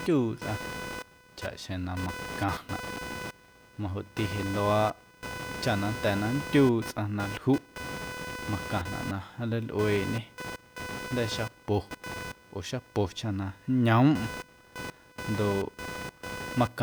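Computer activity noise runs through the whole recording: shifting load from the processor, graphics card or mouse disturbs the audio circuit's shared ground, leaving a buzzy, chirping pulse near 500 Hz that tracks the computer's activity rather than the speech, sitting only about 10 dB beneath it.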